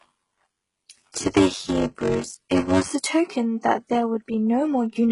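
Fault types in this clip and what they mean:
HE-AAC compression: The whole clip is band-limited, with nothing above about 11.1 kHz, and the treble sounds rebuilt rather than captured, pointing to a likely low-rate HE-AAC encode, which fits a bitrate around 12 kbps. The coder keeps only the lower spectrum and synthesises the top by copying lower bands upward under a coarse envelope. The codec damage is heavy, so the regenerated highs do not line up harmonically with the speech below them.
block size mismatch (padded): From the start to about 2.93 s, one stage hands over shorter blocks than the next stage reads, and each block is topped up with zeros. The sound fits reads of 512 samples, with a short silent gap in every block. Those regular gaps produce a buzz at 93.8 Hz. Because the padding stretches the timeline, the speech in that stretch runs slow, at 0.625 times normal speed.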